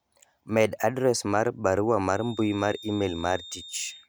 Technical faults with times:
2.09-4.09 feedback whistle

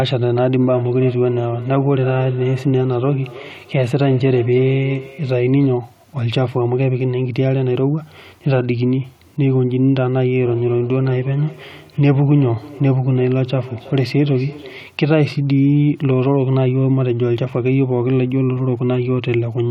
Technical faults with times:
0.61-5.90 feedback echo between two devices
10.41-15.02 feedback echo between two devices

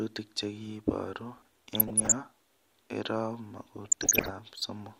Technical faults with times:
1.38-2.14 DAB burbling
3.85-4.32 DAB burbling

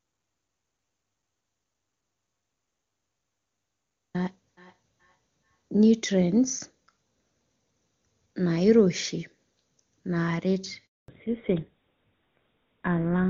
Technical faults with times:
0.00-4.14 audio dropout to silence
4.57-5.99 feedback echo between two devices
10.86-11.08 handover gap
11.08-13.29 fallback to narrowband

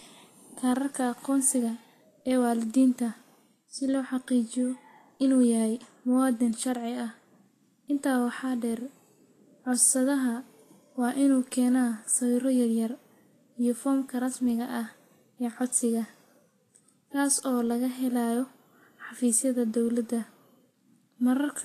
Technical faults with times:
0.00-21.64 Vorbis compression

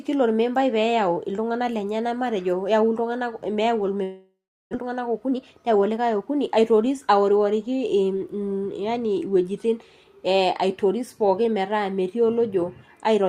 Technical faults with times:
4.03-4.75 long network dropout
4.82-6.67 jitter buffer speed-up

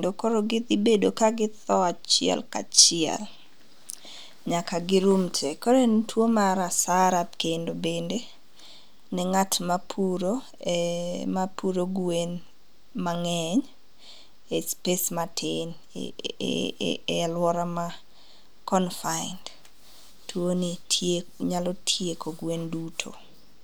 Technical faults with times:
none

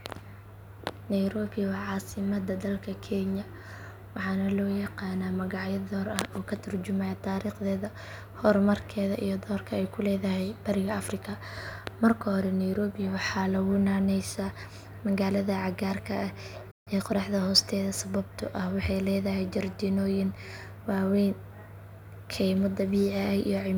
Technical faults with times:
16.71-16.88 playback stall
16.88-17.18 time-compressed catch-up

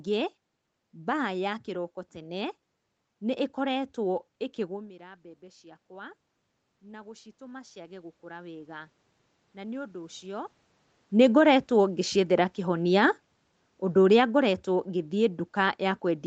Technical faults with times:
4.56-11.59 automatic gain rising
11.15-16.27 automatic gain falling

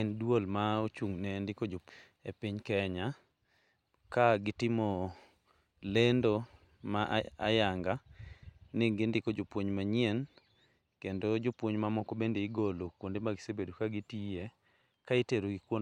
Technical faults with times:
1.89 CD skip

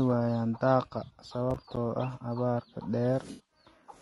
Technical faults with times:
0.00-4.01 low-delay AAC compression
1.05-1.11 AAC frame loss with concealment
1.51-1.77 processor overload crackle
3.31-3.51 AAC frame loss with concealment

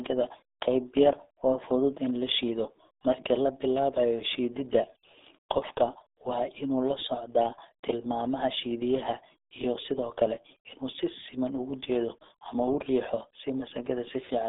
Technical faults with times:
0.00-14.49 RealAudio 14.4 codec

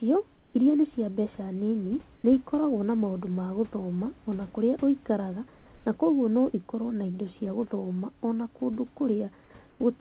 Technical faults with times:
0.36-0.54 comfort noise in place of the background
2.16-2.24 comfort noise in place of the background
5.58-5.86 comfort noise in place of the background
9.70-9.80 comfort noise in place of the background

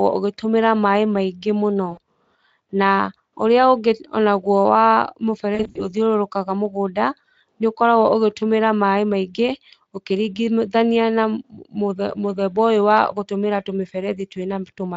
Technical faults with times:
1.91-1.98 VoIP packet loss concealed by the speech codec
5.55-5.85 VoIP packet loss concealed by the speech codec

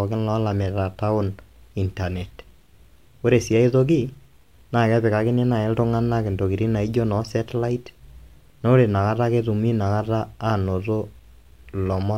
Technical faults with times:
none

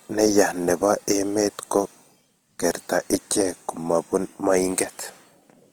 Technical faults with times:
0.00-5.72 Opus compression

